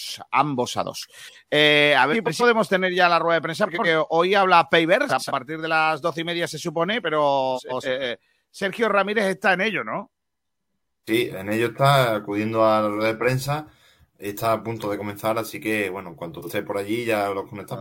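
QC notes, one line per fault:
2.12–2.43 s, 3.66–3.86 s, 5.09–5.31 s, 7.55–7.86 s, 16.38–16.50 s, frames out of order: in each stretch two adjacent blocks of sound play swapped. The blocks are 139 ms at 2.12 and 7.55 s, 93 ms at 3.66 and 5.09 s, and 46 ms at 16.38 s, which fits runs of one to three codec frames. Each sounds like a brief garbled flutter. No audio is missing or repeated, and timing is unchanged, which sets it apart from a dropout or a stutter.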